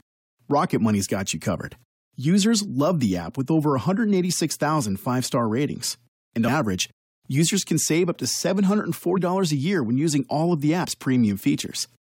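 Compressed frames skipped at 10.83 to 10.85 s: the audio jumps forward by about 50 ms, which fits two whole compressed frames of 23.2 ms each that were never played because they were missing from the file or rejected by the decoder as damaged.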